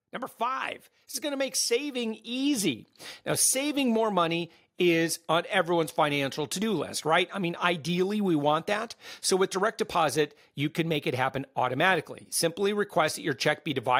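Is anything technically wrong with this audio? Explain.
Yes. From 0.11 to 2.97 s, automatic gain rising: the AGC judged the input too quiet and raised gain by about 9 dB, so speech and background swell together.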